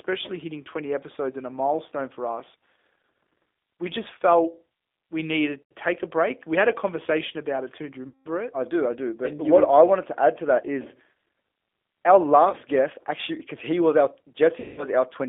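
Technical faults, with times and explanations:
Throughout, G.729 codec: band held to about 250 Hz–3.5 kHz, speech rebuilt from a few pulses per frame, so it's rough and synthetic, consistent with 8 kbit/s G.729.
5.62–5.72 s (after "just felt we needed"), 8.08–8.28 s, 12.50–12.56 s (before "guest actually because he"), 14.60–14.86 s (after "because he was our"), VoIP packet loss concealed by the speech codec: the decoder stretches its last pitch and filter into a fading buzzy tone or coloured noise for gaps of 90, 180, 30 and 180 ms.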